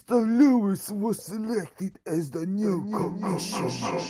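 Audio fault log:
2.59 to 4.10 s, feedback echo between two devices: from 2.59 s to the end, the speech starts coming back on itself at a fixed spacing of roughly a third of a second, each return thinner and more ringing than the last. The loudest return sits only about 3 dB below the direct speech, so the repeats stack up rather than decaying. A second device in the room is replaying this microphone's signal, which the microphone captures again, and the echo canceller cannot remove audio played by another device.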